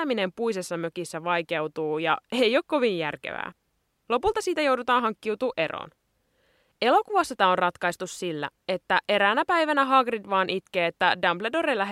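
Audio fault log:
No technical faults can be heard anywhere in the recording; the signal stays continuous and steady in level throughout.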